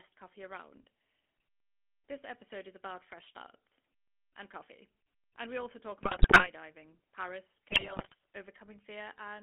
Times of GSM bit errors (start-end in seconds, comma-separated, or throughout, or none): 6.02-6.49, 7.72-8.15